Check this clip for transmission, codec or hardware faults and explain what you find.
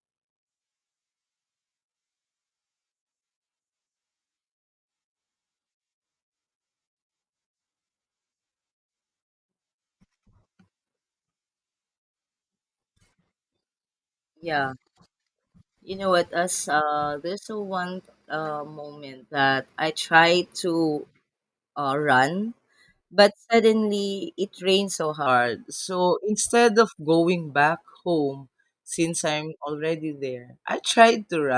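One fault appears: a wrong sample rate from 25.26 s to the end at 31.57 s. The speech slows to 0.919 times its speed and drops 1.47 semitones together, which fits 24 kHz audio played at 22 kHz without conversion. Unlike a plain pitch shift, the tempo falls along with the pitch.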